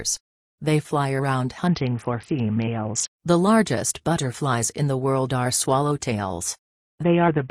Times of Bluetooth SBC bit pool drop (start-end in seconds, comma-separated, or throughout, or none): 1.67-3.10, 7.03-7.50